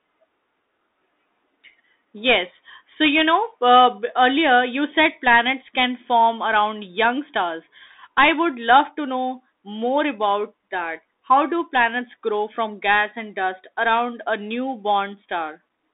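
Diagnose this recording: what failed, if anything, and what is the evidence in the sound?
Thin, boxy speech with a granular hiss running beneath it for the whole clip, s sounds turning scratchy, and louder bright passages breaking up. The band sits between roughly 250 Hz and 3.7 kHz, with nothing above. The stage is the codec: this is the Bluetooth CVSD headset codec, whose one-bit up-or-down stream, pointing to a 64 kbps link, lets its adaptive step lag behind fast high-frequency movement. That lag produces the distortion, while the constant up-and-down stepping produces the grainy noise floor.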